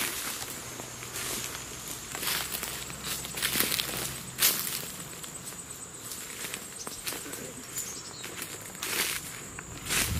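From 0.60 to 2.09 s the sound runs about 5.7% slow and drops roughly a semitone (101 cents), then snaps back. From 6.59 to 7.23 s it runs 5.7% fast, about 95 cents sharp. This is likely a drift correction step, where clock-matching software abruptly retimed playback.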